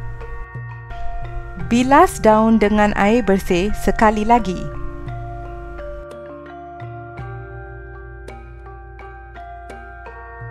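Nothing in the audio stood out as a technical problem on listening.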